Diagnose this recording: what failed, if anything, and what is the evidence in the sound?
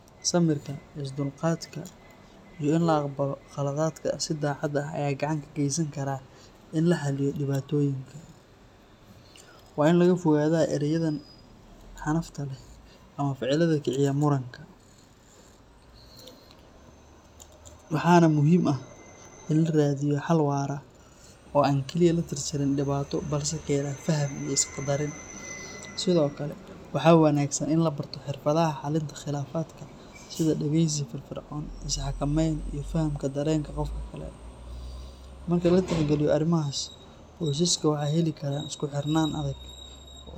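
Nothing stood out on listening to this speech recording, and no stage in the chain gives any sign of having failed.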